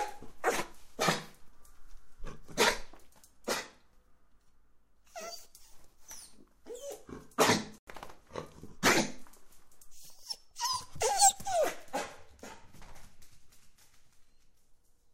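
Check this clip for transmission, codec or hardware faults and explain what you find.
There is one fault, a corrupt frame muted. At 7.78 to 7.87 s, a damaged compressed frame was rejected and replaced with silence. The hole starts abruptly, lasts about 94 ms, fits one frame, and keeps timing, unlike concealment's smoothed fill.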